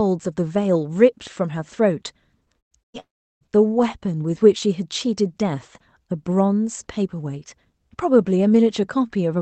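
At 2.59 to 2.74 s and again at 2.83 to 2.97 s, the speech suddenly stalls into a brief held buzz or hiss that fades out, then jumps ahead. Each is a burst of packet loss. About 120 ms of audio never arrived in time, and the receiver covered roughly 110 ms of each gap by extending and fading the last sound before the stream picked up later, with the lost stretch simply gone.

Right after, from 3.00 to 3.44 s, a longer hole opens. The sound smears into a fading buzz, then goes quiet for about 360 ms before the speech returns further along, with about 420 ms missing. This is likely a long network dropout, during which no audio reached the receiver. Its concealment tails off into what is effectively silence.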